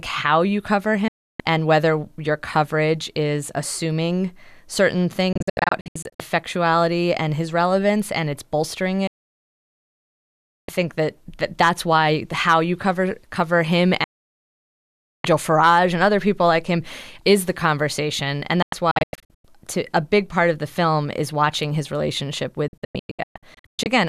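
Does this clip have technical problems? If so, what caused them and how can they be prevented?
Yes, there are digital broadcast dropouts at 1.08, 5.33, 9.07, 14.04, 18.62 and 22.68 s. Each time, the receiver lost good frames and muted within 3 ms. The 9.07 s hole is the longest at about 1.6 s. The ones at 5.33, 18.62 and 22.68 s stutter as scattered short gaps. A stronger, cleaner signal, through a better antenna or placement, would prevent them.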